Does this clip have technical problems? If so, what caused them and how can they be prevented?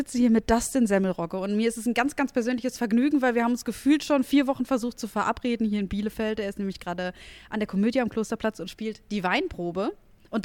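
Yes. Mains hum runs from 5.65 to 7.68 s as a steady 60 Hz tone with some low harmonics, sitting roughly 30 dB below the signal. A ground loop or nearby transformer let the power line leak into the signal path. Prevent it with a single grounding point, balanced cables and distance from power supplies.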